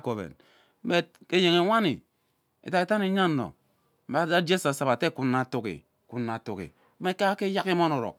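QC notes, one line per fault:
No faults found in this speech clip. Nothing here needs a timed entry.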